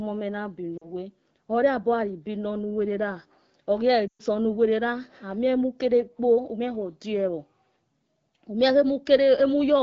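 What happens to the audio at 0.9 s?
Lost AMR speech frames, from about 0.77 s to 0.90 s, just ending at the moment asked. Radio errors corrupted the coded speech, so the AMR decoder filled the 40 ms gap (consistent with two 20 ms frames) by repeating the last good pitch and vocal tract settings at falling gain. The sound briefly smears and sags, fading quickly in this wideband stream, then returns thin and rough for a moment as the decoder recovers.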